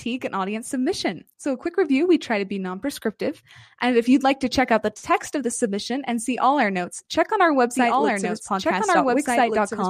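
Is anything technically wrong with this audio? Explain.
Yes. From 7.74 s, just after "notes check on our", to the end, the speech has a doubled audio track: a second full-band copy of the same speech trails about one and a half seconds behind, roughly 5 dB quieter. It most likely comes from the same audio being captured a second time through a slower path. Unlike an echo or reverb, there is a single copy with no decay or room colour, and it cuts in abruptly.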